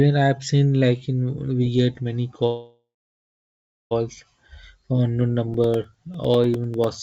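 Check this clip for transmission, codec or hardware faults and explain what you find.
Two faults stand out in this speech clip, which came through a call path with nothing above 8 kHz, consistent with G.722.

From 2.46 to 3.93 s there is a call audio freeze. Packets were likely held up in transit, so the jitter buffer emptied and the receiver stretched the last sound into a fading buzz or hiss, then about a second of silence. Speech then resumes where it stopped, delayed by about 1.45 s.

From 5.54 to 6.94 s there are periodic USB or driver dropouts. Something blocks the audio driver every 0.1 s, and each time roughly 2 ms of audio is replaced with silence. This happens about fifteen times and is heard as regular ticks through the speech.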